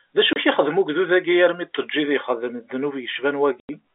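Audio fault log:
0.33 to 0.36 s and 3.6 to 3.69 s, packet loss filled with silence. The speech drops out completely, first for 30 ms and then for 90 ms. Lost packets were replaced with silence. The second gap is three times the first, which fits 30 ms packets, with one lost and then three in a row. The sound stops and restarts abruptly, with hard edges. The narrow telephone band of the G.711 line carries on around the holes.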